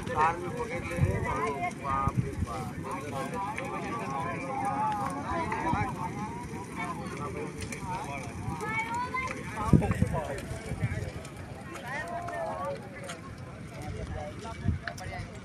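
Listening through the recording, nothing stood out as a technical problem at any point.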